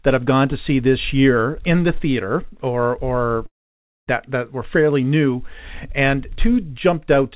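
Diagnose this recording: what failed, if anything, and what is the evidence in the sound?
Network stage, most likely a long network dropout. From 3.46 to 4.09 s the last sound smears into a fading buzz, then falls to near silence, and the audio resumes with about 0.6 s missing. Everything sits below 4 kHz, as in a narrowband call path.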